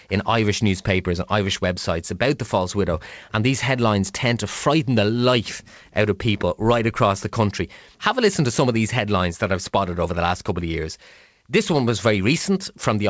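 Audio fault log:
No faults are heard anywhere in this speech.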